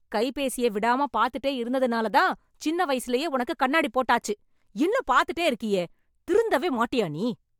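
Nothing stood out as a technical fault on listening to this speech recording.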